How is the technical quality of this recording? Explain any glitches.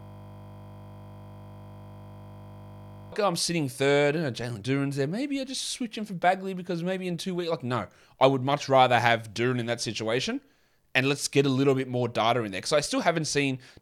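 The recording has one serious glitch at the very start; speech only comes through once it clears. From 0 to about 3.12 s, already under way when the clip begins, there is a system hang loop: the driver stalled while the hardware kept replaying one 20 ms buffer, giving a steady 50 Hz buzz. Unlike mains hum, it replaces the audio outright and stops abruptly before "oh I'm sitting third".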